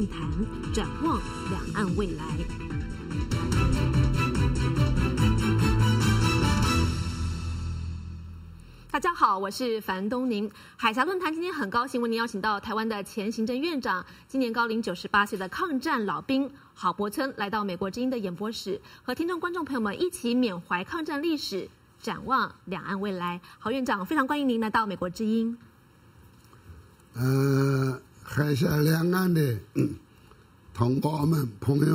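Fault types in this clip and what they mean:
Channel delay (comb filtering): One channel arrives under a millisecond late, and summing to mono cuts notches from around 700 Hz upward, leaving the sound hollow and phasey.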